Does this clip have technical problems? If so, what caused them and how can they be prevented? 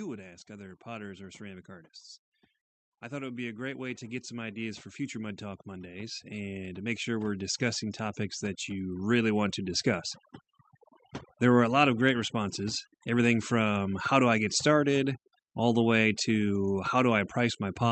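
Yes. Overdone noise removal runs through the whole speech clip. The suppressor pushes frequency bands near its noise estimate far down or off, so the background collapses into near silence with twinkling specks, and the quieter parts of the voice vanish with it. Setting the noise reduction gentler, or recording in a quieter room, prevents this.

Automatic gain rising from 2.86 to 10.14 s lifts the level by about 14 dB. The gain control judged the input too quiet and raised it slowly, so voice and background swell together over several seconds. A consistent microphone level, or a slower and capped AGC, prevents it.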